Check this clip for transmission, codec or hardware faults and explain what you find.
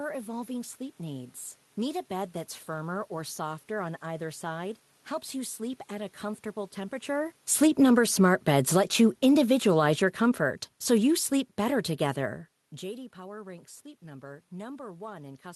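One system fault stands out: the automatic gain falling, from 7.10 s to 12.44 s. The automatic gain control judged the input too loud, or its background noise too strong, and pulled its gain down gradually over those five seconds, by about 10 dB in total. The speech and the room noise behind it therefore sink together, so the background drops in step with the talker. The talker's own movement near 7.0 s and 12.5 s, a natural level change, frames this stretch. The Opus call path's coding noise and its top end ending near 12 kHz are present.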